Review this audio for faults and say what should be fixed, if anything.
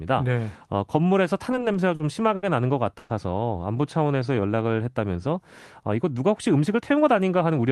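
Between 1.51 and 2.46 s the speech shows repeated stalls (stutter): five short breaks, the longest 70 ms, totalling 140 ms and covering about 15% of that stretch. Packets were arriving late or slower than playout, so the jitter buffer kept running dry and the receiver stretched the last sound over each hole. Nothing is lost, but the speech drags and catches. Prevention: give the jitter buffer a larger minimum target on this link so brief arrival slowdowns are absorbed without underruns.

From 2.99 to 3.13 s there is a call audio freeze: 110 ms where the previous sound is held and smeared rather than going silent, after which the speech resumes exactly where it stopped. The playout delay grows by that same 110 ms. The likely cause is packets being held up in transit long enough to empty the jitter buffer. Prevention: find and reduce the network hold-ups behind these bursts, such as queueing on a congested uplink or Wi-Fi retransmission stalls.

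Between 4.07 and 4.69 s a jitter buffer slow-down plays the speech at 88% speed with pitch unchanged, adding 85 ms. The receiver is rebuilding its reserve by repeating single pitch periods and bits of pauses many times in a row. The result is drawn-out syllables. Prevention: keep the buffer target stable after a delay spike so it does not need to refill this quickly.

From 6.59 to 7.59 s a jitter buffer speed-up runs the speech at 112% speed with pitch unchanged, removing about 150 ms. The buffer held more audio than its target. The receiver then trimmed short runs of pitch periods to bring latency back down, so this stretch sounds hurried. Prevention: smooth the network delivery so packets do not arrive in clumps, or let the buffer drain more gradually.

On the Opus call path, the high end stops near 12 kHz and the coding noise fits a bitrate around 32 kbps.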